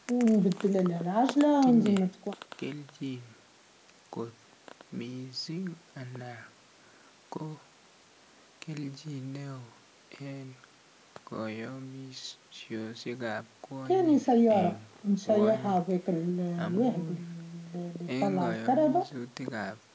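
No faults are audible in the speech; the call microphone processing trims the lowest bass and leaves nothing above 8 kHz, as expected for that path.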